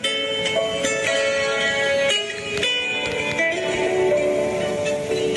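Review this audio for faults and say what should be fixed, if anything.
Gain pumping runs through the whole clip, with the gain swinging by about 15 dB. The likely cause is input gain set far too high, with a fast limiter or compressor clamping down whenever the level peaks and releasing afterwards. On a waveform, the envelope looks flattened, with peaks squashed flat and the quiet stretches raised. A spectrogram shows the noise floor brightening between events and darkening beneath them. To prevent it, lower the input gain so peaks sit well below the limiter threshold.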